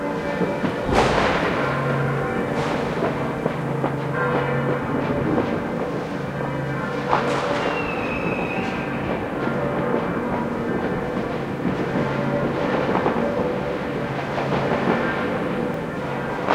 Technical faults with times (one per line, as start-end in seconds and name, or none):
15.74 block of digital silence